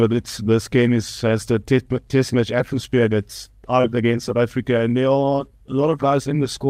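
At 3.81 to 3.91 s there is a short concealed packet loss. A packet arrived too late or not at all, so the decoder had no data for about 20 ms and synthesised about 24 ms of fill by extending the preceding sound before crossfading back into the received signal. The disturbance spans roughly a tenth of a second and is heard as a brief smear or wobble. Timing shifts by around ten milliseconds through the gap.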